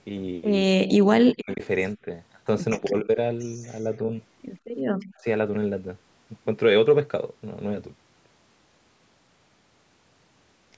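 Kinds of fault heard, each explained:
Speech suppressed in double talk: at 0.67 to 1.62 s, 1.96 to 2.07 s, 2.74 to 3.09 s and 5.19 to 5.26 s the speech dips and breaks up. The first stretch falls by about 40 dB at its deepest. The 2.74 s stretch drops by about 15 dB, the 1.96 s stretch by about 5 dB and the 5.19 s stretch by about 10 dB. The likely cause is an echo canceller that could not tell this talker from loudspeaker echo while the other side spoke, so it turned both down.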